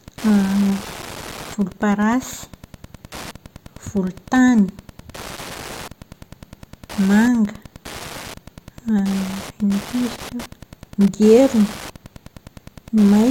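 A nearby Wi-Fi radio is coupling into the audio circuit, which rectifies its beacon transmissions every 102.4 ms. This Wi-Fi interference runs through the whole speech clip as a steady ticking, nearly ten per second, sitting roughly 20 dB below the speech.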